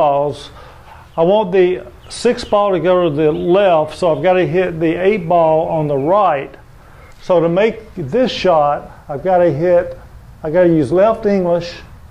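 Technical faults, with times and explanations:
No technical faults are audible anywhere in the clip.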